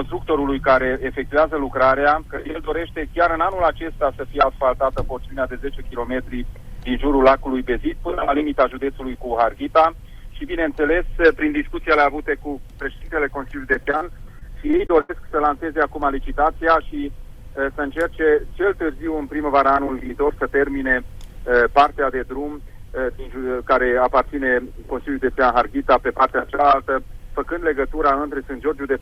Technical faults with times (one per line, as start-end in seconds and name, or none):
13.73-14.03 repeated packet loss (robotic sound)
14.39-15.11 repeated packet loss (robotic sound)